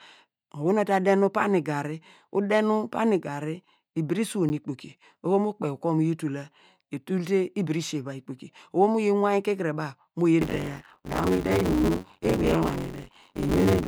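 Speech, with two faults. At 4.49 s, between "nu pani garri ibire" and "ikpoki oho", a block of digital silence only 10 ms long drops the signal to zero and back with no fade, so it registers as a single tick rather than an audible gap. That most likely points to a late or unfilled buffer, not a dropout in the recording itself. From 10.41 s, just after "mu yi", to the end, buffer tearing sets in: a rattling buzz near 93.8 Hz, which fits a 512-sample buffer, present only while sound is present. Roughly half of each period replays audio about 40 ms old, and that repeated stale fragment distinguishes it from steady clipping distortion.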